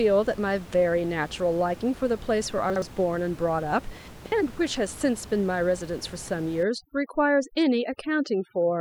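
At 2.7 s the speech briefly jumbles, and again from 4.08 to 4.32 s a longer garbled stretch comes with hard joins. These are chunks out of order. A slice of audio played after material that should have followed it, leaving abrupt seams. The first event, lasting until 2.82 s, fits one 60 ms chunk arriving one place late. The second points to a chunk landing about three places late, so more audio is shuffled around it.

From 6.63 s to the end, the background drops and breaks up into twinkling, warbling specks. This is overdone noise removal. The room noise, about 19 dB below the speech, prompted an aggressive reduction that switches individual frequency bands down whenever they approach the noise estimate. Quieter parts of the voice are cut along with the noise.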